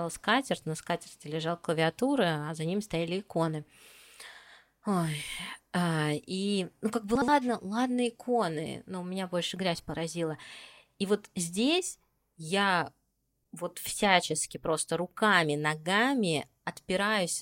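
Frames out of order occur from 7.15 to 7.28 s, just after "и ну как бы" and before "ладно иконы но у". Two adjacent blocks of about 64 ms each, a size that fits two frames per block, were decoded in swapped order. This short stretch of speech plays with its halves exchanged, giving a brief garbled flutter. No time is lost, and the speech continues at its normal pace afterwards.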